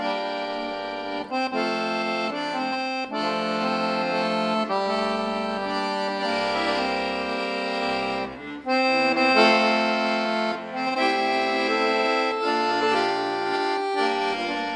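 Nothing in this recording stands out as a technical fault at any point.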